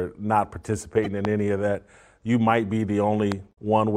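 A short speech recording is broken twice by brief glitches, at 1.04 to 1.07 s and again at 3.49 to 3.58 s. These are damaged data in a compressed stream: corrupted bytes make the decoder misread frames and lose sync until it finds the next valid frame header. Two sharp single loud pops, roughly 15 dB above the speech, land at 1.25 to 1.27 s and 3.32 to 3.34 s while the speech carries on underneath, likely from a sudden voltage step such as a switch, plug or static discharge.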